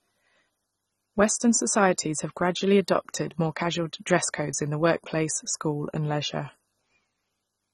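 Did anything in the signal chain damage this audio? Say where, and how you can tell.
Yes. At the codec stage, likely AAC compression at a low bitrate, the speech is cut off above 11.6 kHz throughout, leaving it dull and smeared, with a warbling or fizzy texture.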